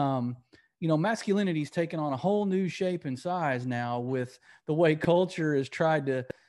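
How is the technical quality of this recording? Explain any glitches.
The recording holds up well technically, with no glitches anywhere in the speech. There is nothing here that needs explaining.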